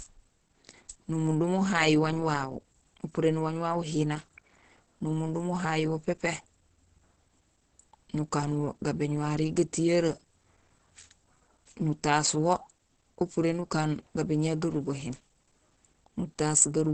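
Opus compression, likely, runs throughout the speech: nothing survives above 8.6 kHz, and the sound is muffled and hoarse with plainly audible damage. This points to the encoder's wideband speech (SILK) mode at a low rate, which fits roughly 16 kbps.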